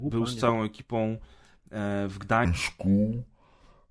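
From 2.45 s to the end at 3.90 s, the samples are played back at the wrong sample rate, with no conversion between the rate they were captured at and the rate the output runs at. The slowdown fits audio recorded at 32 kHz being clocked out at 22 kHz. Everything therefore runs at about 0.69 times normal speed and drops by roughly 6.5 semitones, so the speech turns deep, slow and drawn out for that final stretch.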